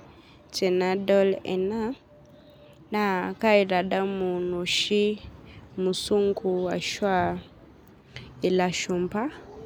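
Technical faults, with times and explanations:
No technical faults can be heard in this speech.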